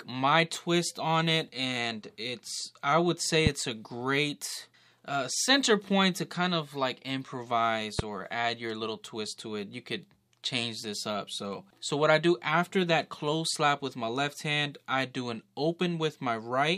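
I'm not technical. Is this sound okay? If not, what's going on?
No. There are two loud pops, one at about 3.47 s and one at 7.99 s. Each is a sharp click, much louder than the sound around it, lasting a split second. The likely cause is a sudden electrical jolt, such as a plug, switch or static. The sound carries on underneath.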